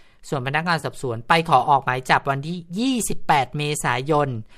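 At 0.80 to 0.85 s the speech has AAC frame loss with concealment: about 30 ms of signal, consistent with three short low-delay frames, is missing, and the decoder rebuilds it from the preceding spectrum. The result is a brief smeared, noisy patch over the light graininess that likely comes from low-delay AAC coding.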